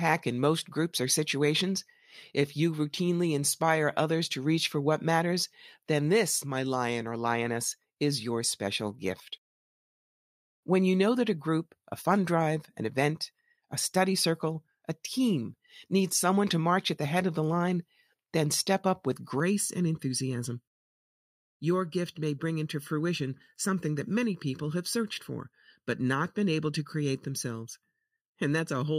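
From 19.4 s to the end, the speech turns hollow and phasey. This is channel delay, heard as comb filtering. One channel runs late by about 0.7 ms, and the two are summed to mono. Whatever both channels share then cancels at evenly spaced frequencies. The first notch sits somewhere near 700 Hz, with more above it at regular steps. These fixed gaps thin the speech and leave it hollow and phasey.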